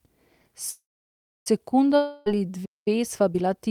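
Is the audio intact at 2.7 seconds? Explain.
No. At 2.7 seconds the speech is in the middle of a playback stall that runs from 2.65 to 2.88 s. The sound stops abruptly mid-flow and the output falls silent for about 0.21 s. Then the speech resumes. The likely cause is the player running short of data, or its playback thread being held up, so nothing reached the output until it caught up again.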